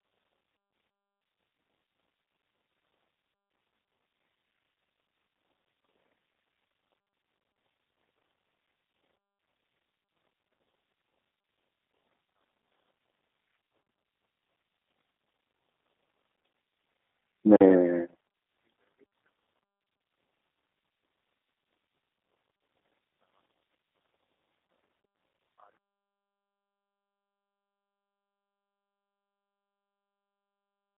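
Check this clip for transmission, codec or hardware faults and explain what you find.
Two faults are present: G.729 codec coding across the whole clip and one gap between chunks.

Throughout, the G.729 codec at 8 kbit/s rebuilds the speech from a filter and sparse pulses, passing roughly 150 Hz to 3.7 kHz and nothing above 3.8 kHz. The result sounds muffled, rough and plainly synthetic.

From 17.56 to 17.61 s there is a gap between chunks: silence was left at the join between chunks, leaving a 44 ms hole of silence.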